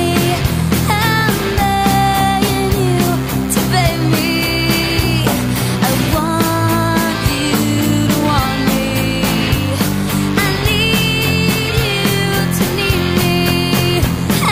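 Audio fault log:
Throughout: DECT cordless phone buzz. A thin, steady buzz at 100 Hz with dense harmonics sits well below the sound. A nearby cordless handset or base station bursts every 10 ms and the audio circuit rectifies it.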